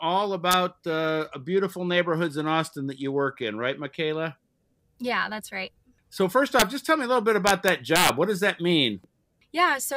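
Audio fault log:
0.51–0.53 s, 6.60–6.62 s and 7.47–8.09 s: integer overflow. Loud peaks, pushed up to about 4 dB past full scale, wrap to the opposite sign instead of being limited, so each flips across the whole range. Violent cracks result, far harsher than the flattened buzz of clipping.
0.95–3.90 s: Bluetooth SBC bit pool drop. Treble goes dull and a gritty noise rises, which fits the bit pool falling from 28 to 13, near 102 kbps. Starved of bits, the top sub-bands get few or no bits and the rest are coarsely quantised. Unlike a low-pass, grit accompanies the dullness.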